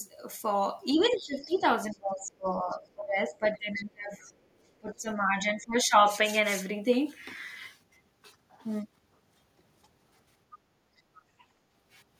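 From about 0.94 to 4.2 s the speech dips and breaks up, by about 20 dB at worst and for roughly two seconds in total. That's speech suppressed in double talk, likely the echo canceller ducking everything while both sides spoke at once. The same thing returns more gently from 4.8 to 5.97 s, about 15 dB down for around 0.7 s.

Under that first stretch, from 1.06 to 2.77 s and again from 3.55 to 4.28 s, a faint second voice sits about 25 and 30 dB below the talker. It's the other side's voice leaking through, likely loudspeaker echo the canceller didn't fully remove. Brief scraps of it also show up at 10.51–10.58 s and 11.15–11.22 s.

Between 10.96 and 11.39 s the room tone drops out for roughly 150 ms, by about 18 dB. That's background gated by the echo canceller, which clamped the mic hard while the loudspeaker was playing.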